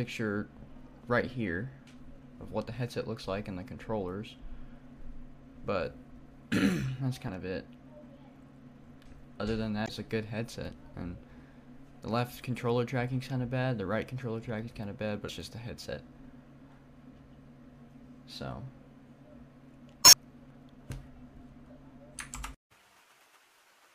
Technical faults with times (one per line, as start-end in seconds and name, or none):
7.25-7.29 damaged data in a compressed stream
9.84-9.89 damaged data in a compressed stream
15.25-15.30 damaged data in a compressed stream
20.01-20.14 damaged data in a compressed stream